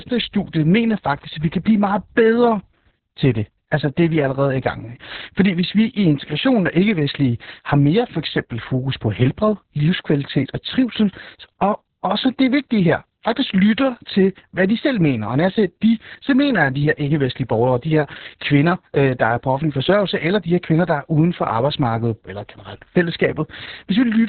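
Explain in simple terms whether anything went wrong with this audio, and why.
Opus voice compression runs throughout: squeezed very hard, it cuts everything above about 4.3 kHz and roughly rebuilds the speech, leaving it muffled, hoarse and slightly robotic.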